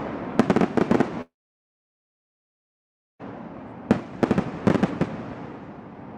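From 1.21 to 3.24 s, likely a long network dropout: a brief fading buzz, then 1.9 s silence; the waveform flatlines and spectrogram goes blank.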